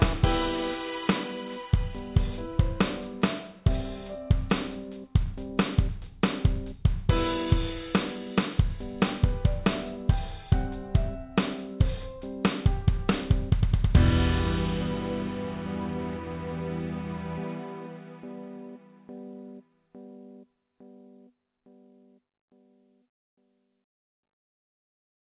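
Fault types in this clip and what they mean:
No faults heard in this clip.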